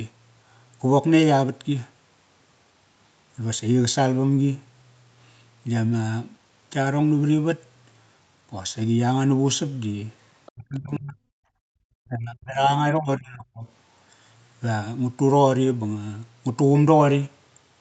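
At 10.46 s the echo canceller likely let the other side's voice leak through, leaving a very faint scrap of that second voice, roughly 30 dB below the speech, for about 60 ms. From 10.52 to 11.19 s, both sides talk at once and the canceller likely suppresses speech in double talk, pulling the talker's voice down by as much as 40 dB. From 11.47 to 11.67 s, the canceller gates the background while the loudspeaker plays, so the room sound drops by about 39 dB before returning. Double-talk suppression again likely causes the speech to dip from 11.95 to 12.83 s, by up to 40 dB, and from 12.99 to 13.67 s, by up to 25 dB.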